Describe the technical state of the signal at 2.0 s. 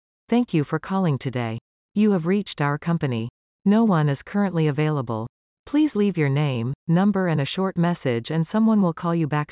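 At 2.0 s the signal is intact, with no audible fault at that point.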